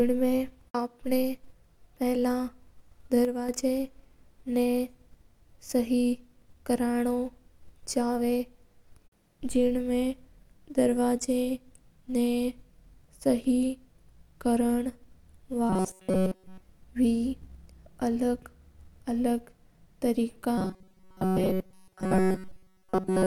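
One channel drops out from 3.25 to 3.49 s: the speech abruptly falls by about 6 dB for roughly a quarter second, then returns. This is likely a stereo channel briefly lost before the mono sum, halving everything common to both sides.

Robotic sound from repeated short buffers appears from 15.70 to 16.62 s and again from 20.58 s to the clip's end at 23.27 s. The speech becomes a rigid metallic buzz at 188 Hz, with essentially all of it repeated rather than fresh. The likely cause is audio arriving too seldom, so playback loops a fragment about 5.3 ms long, which sets that fixed pitch.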